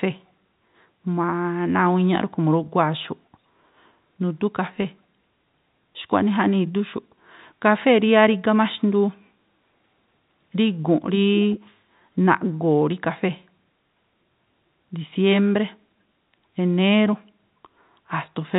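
Speech, carried over G.711 telephone coding with nothing heard above 4 kHz. From 11.11 to 11.6 s an echo leak is audible: a delayed copy of the voice trails the original by 440 ms, at roughly 10 dB below it. The likely cause is a loudspeaker on one side whose echo canceller let part of the returned sound through. On a waveform this looks like a smaller repeat of the preceding burst, and a spectrogram shows the same harmonic pattern, weaker and shifted 440 ms to the right.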